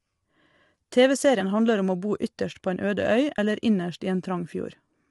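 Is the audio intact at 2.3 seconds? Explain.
No. The speech is likely going through low-delay AAC compression across the whole clip, including 2.3 s. Its short frames, at a rate that fits about 32 kbps, resolve pitch harmonics poorly, so the voice sounds rough and grainy, with noise between harmonics and nothing above 11.6 kHz.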